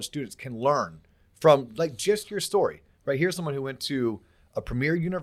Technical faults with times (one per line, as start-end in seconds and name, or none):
none